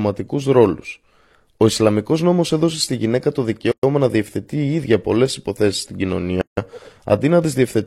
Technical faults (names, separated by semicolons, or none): gap at a join of encoded pieces